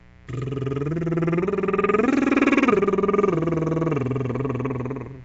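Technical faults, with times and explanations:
Throughout, mains buzz: a steady, raspy buzz sits under the music, roughly 30 dB below it. Sharp switching spikes from a dimmer, rectifier or unshielded cable enter the signal twice per 60 Hz cycle. Because the spikes are so abrupt, they produce a dense comb of 60 Hz harmonics rather than a pure hum. On a spectrogram this shows as evenly spaced horizontal lines climbing into the kilohertz range. In the waveform, small regular spikes repeat every 8.3 ms.
Throughout, Nellymoser compression: the music has a rough, hissy halo and a smeared, underwater character, with plainly audible coding damage. This is likely the Flash-era Nellymoser Asao codec, and the damage fits a low rate around 32 kbps. It spreads a fixed, small bit budget across short blocks, so quieter bands get nothing and are filled with noise. On a spectrogram, energy stops sharply at 7.8 kHz, and the region below shows blocky, speckled noise patches.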